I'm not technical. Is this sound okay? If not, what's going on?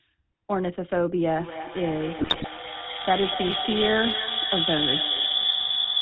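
No. Throughout, the speech has the buzzy, gravelly roughness of the GSM full-rate codec, an early mobile-phone coding method that rebuilds the voice from a simple pulse pattern. Unlike general muffling, it adds grit and sounds clipped of its upper brightness.

From 1.38 s to the end at about 6 s, a feedback howl builds. Two devices in the same room on one call keep re-amplifying each other. The result is a shrill tone around 3 kHz, with the sound going round the loop roughly five times a second. Unlike an echo, it grows instead of fading.

From 2.18 to 2.47 s, GSM bit errors break the speech into squawks, pops and gargling. A weak mobile signal corrupted the data reaching the decoder. Unlike a dropout, which goes silent, this makes the audio wildly wrong for a moment.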